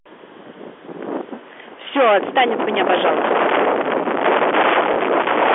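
From the first moment to the end of the speech, every loud syllable carries a harsh, buzzing fuzz, with a gritty edge riding on the peaks. That is hard clipping: the signal was driven about 18 dB beyond what a stage in the chain could pass, so around a fifth of the waveform has its crests sheared flat. Those flattened tops add a spray of upper harmonics, and only those that fall inside the 300 Hz to 3.4 kHz telephone band of the G.711 A-law line get through.

Between 4.94 and 4.96 s there is a small blip. This is packet loss with the last packet repeated. About 20 ms of audio went missing, which fits a single lost 20 ms packet, and the receiver filled the gap by playing the previous chunk again. That single repeated chunk is what comes through as the small blip.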